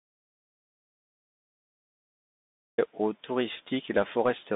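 A speech recording passed through a Bluetooth CVSD headset codec, whose one-bit delta coding, consistent with a 64 kbps link, confines the sound to roughly 200 Hz to 3.7 kHz with nothing above 3.8 kHz; plainly audible slope overload roughens sibilants, and granular hiss lies under the speech throughout. The input was likely lost for a while, with silence written in its place, so an audio dropout to silence is already under way at the start and runs to 2.78 s: dead silence, no room tone, until the sound cuts in mid-flow.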